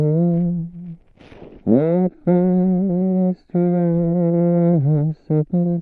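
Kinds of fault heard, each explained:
No faults turn up anywhere in this one, so there's nothing here to name or explain.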